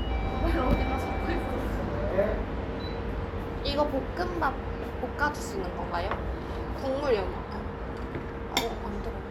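No technical faults occur at any point in this recording, so there is nothing to describe in time order.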